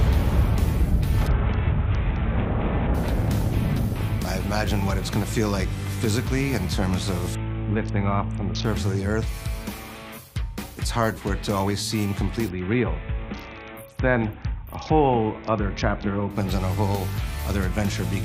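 Three Bluetooth SBC bit pool drops, at 1.27–2.94 s, 7.35–8.65 s and 12.49–16.30 s, dull the treble and add gritty noise as the link starves the upper sub-bands, consistent with a pool falling from about 28 to 6. On a spectrogram the top band blanks out.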